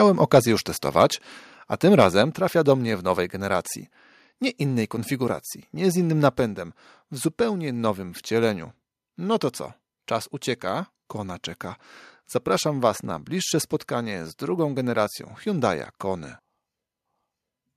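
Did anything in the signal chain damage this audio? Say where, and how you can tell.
Yes. Microphone overload shows up at the converter stage, at 0.35 to 0.38 s and again at 1.99 to 2.06 s, between "a tym" and "trafia do mnie w". Peaks run about 2 dB and about 3 dB past full scale. A few percent of samples are flattened. That gives a harsh crackle. Excessive input gain is the likely cause.

The microphone volume stepped down three times, in the call processing stage. There are abrupt level drops of about 2 dB at 1.02 s and about 4 dB at 2.22 s, the latter shortly after the second clipped peak. A further drop of about 1 dB comes at 6.33 s, just after "konfiguracji nie z innym". Background and voice fall together. That points to an automatic cut in device input volume.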